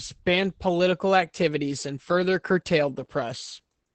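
Throughout the speech, Opus voice compression is plainly audible. Nothing survives above about 8.8 kHz, so the voice sounds muffled, and the linear-prediction coder's coarse treatment of the excitation adds a hoarse, faintly robotic grain, which fits a wideband SILK mode at a bitrate around 12 kbps. Unlike a plain low-pass filter, which only dulls the top, this coder also roughens the texture of the voice inside the band it keeps.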